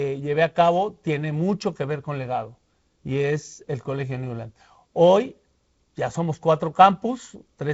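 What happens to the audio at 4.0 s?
Nothing goes wrong at 4.0 s; the speech carries on intact through the G.722 wideband telephone coding, with its band reaching up to about 7.7 kHz.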